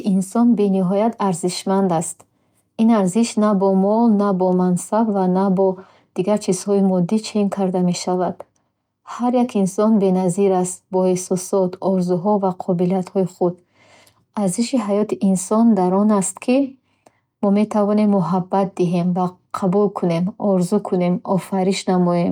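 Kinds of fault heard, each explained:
No technical fault can be heard anywhere in this speech recording. There is nothing to list under any kind of fault.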